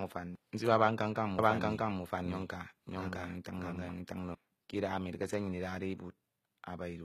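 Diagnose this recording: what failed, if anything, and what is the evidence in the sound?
Codec stage: throughout, sibilants sound gritty and metallic, and the spectrogram shows a smeared, copied-looking treble band. This is likely HE-AAC compression at a low bitrate.

Playback or editing stage: from 1.39 to 4.35 s the speech repeats about 0.7 s late at roughly equal level, likely a doubled audio track with abrupt, echo-free edges in the waveform.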